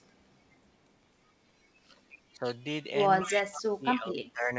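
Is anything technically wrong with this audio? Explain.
Yes. The speech has two stretches of speech suppressed in double talk and one short echo leak.

At 2.36 s, for about 70 ms, the voice dips by roughly 10 dB. A second, deeper suppression runs from 3.2 to 4.55 s. There the level falls by up to roughly 25 dB in patches that add up to about a second, and it sounds gated and thinned. The likely cause of both stretches is an echo canceller that couldn't tell this talker from the far side's loudspeaker echo while both were talking, so it pulled everything down. On a waveform the envelope caves in abruptly. On a spectrogram the energy fades in blocks.

From 3.21 to 3.37 s, an echo leak is audible: a faint copy of the voice trails the original by about 246 ms, roughly 10 dB below it. This is likely residual loudspeaker sound that the far end's canceller failed to remove before sending it back. 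It comes across as a delayed ghost. On a spectrogram the same harmonic pattern reappears a quarter second later, shifted right and weaker.

The call path itself is wideband G.722 at 64 kbps. The spectrogram shows nothing above 8 kHz.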